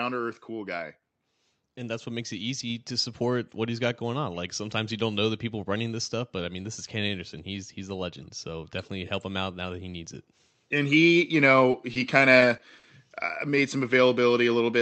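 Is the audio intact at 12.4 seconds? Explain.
No. Between about 12.39 and 12.43 s there is a short concealed packet loss: roughly 20 ms of the call's audio never reached the decoder in time, so the receiver covered the gap by extending the sound that came just before it and then blending back into the real signal. That synthesized bridge replaces the genuine speech at that point, so the moment is heard as a brief smear or wobble rather than clean, continuous speech.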